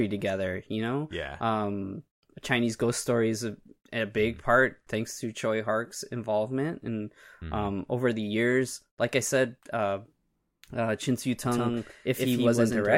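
From 11.46 s to the end, the speech abruptly gains a second, equally loud copy trailing by roughly 150 ms, dry and full-band, like a hard slapback. This doubled audio track likely comes from the signal being captured twice, once through a slower path.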